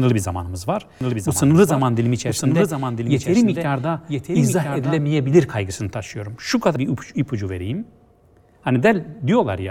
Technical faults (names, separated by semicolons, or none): doubled audio track; compressed frames skipped